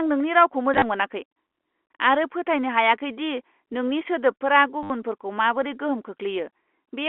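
A short robotic stutter breaks the speech twice: from 0.74 to 0.82 s, where 50 ms of audio drops out in scattered gaps with a longest run of 30 ms, and from 4.83 to 4.9 s, a solid 70 ms. This is packet loss with the last packet repeated. The receiver replays the previous packet until new ones arrive, and the repeats buzz near 100 Hz, which fits 10 ms packets, over the narrow G.711 telephone band.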